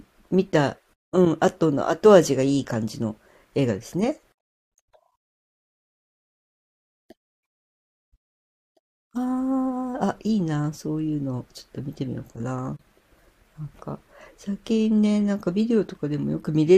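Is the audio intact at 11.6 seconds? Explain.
Yes, the audio is intact at 11.6 seconds, with no fault present at that moment.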